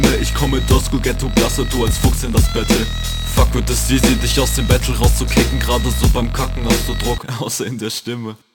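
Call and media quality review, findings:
Crude rate conversion, whole clip: resampler repeating nearest samples without filtering, consistent with a 44.1 kHz to 48 kHz step. Periodic duplication adds inharmonic fizz, roughly 20 dB below the signal, tracking loud and bright passages throughout.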